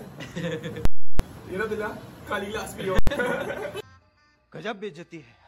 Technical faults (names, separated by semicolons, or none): invalid numbers at full scale